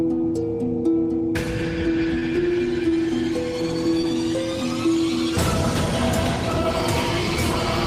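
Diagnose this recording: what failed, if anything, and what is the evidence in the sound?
Short concealed packet loss at 2.19–2.23 s and 4.01–4.05 s, a network fault. Each brief smear fits one 20 ms packet arriving too late. The decoder extended the preceding sound, then crossfaded back into the real audio.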